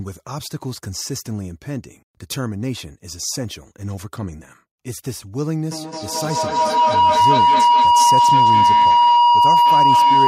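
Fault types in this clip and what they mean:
Feedback howl: a microphone-to-loudspeaker loop with more than unity gain, so each pass grows louder; from 5.71 s a tone near 1 kHz builds, with repeats about every fifth of a second, peaking about 11 dB above the speech and continuing to the end.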